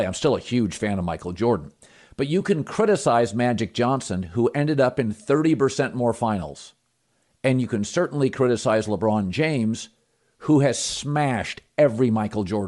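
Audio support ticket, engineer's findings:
Speech grainy and breathy across the whole clip, upper band noise-filled. Likely Bluetooth LC3 compression, 10 ms frames; damage fits a mid bitrate near 48 kbps.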